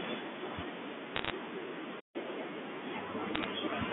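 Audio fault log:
1.15 to 1.30 s, bit errors on a digital phone line: a short burst of sharp ticks and crackle, from flipped bits knocking single samples way off, with the speech underneath unchanged.
2.00 to 2.16 s, playback stall: the sound just drops out mid-flow for about 143 ms, likely the player running dry or its thread getting blocked, then it picks back up.
2.16 to 2.44 s, catch-up at higher speed: right after the gap it runs 1.5 times fast, pitch up roughly seven semitones, as the backlog gets resampled to win time back.
3.35 to 3.44 s, bit errors on a digital phone line: another brief crackly patch of ticks, same deal, individual samples corrupted by flipped bits on the line.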